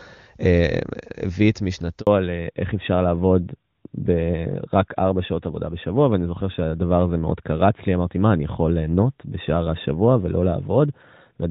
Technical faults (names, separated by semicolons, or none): handover gap; fallback to narrowband